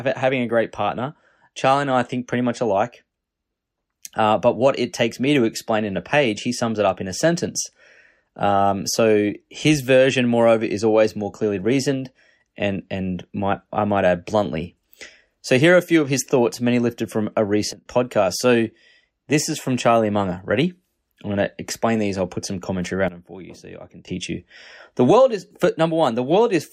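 Right after "many lifted from a", at 17.73 to 17.86 s, the level drops about 19 dB, background included. After "I'll put some commentary" it dips about 15 dB from 23.08 to 24.08 s. Those are sudden gain jumps, likely an unramped digital gain step.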